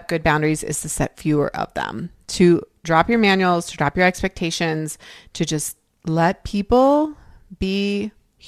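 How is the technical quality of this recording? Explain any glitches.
No technical faults can be heard anywhere in the recording. There are no glitches to explain.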